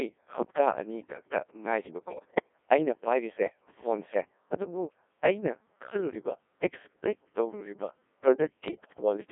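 Throughout, the speech passes through the Codec 2 vocoder at about 1.6 kbit/s, confined to roughly 300 Hz to 3.5 kHz. Only pitch, voicing, energy and spectral envelope survive, and the decoder rebuilds the voice from sine waves, leaving it heavily robotic and buzzy.

From 2.08 to 2.49 s, and again from 8.68 to 9.02 s, bit errors on the digital voice radio link, at a rate of around 7 percent, corrupt the frame parameters. The synthetic voice lurches in pitch, level and tone colour, breaking into bleeps, warbles and robotic gibberish.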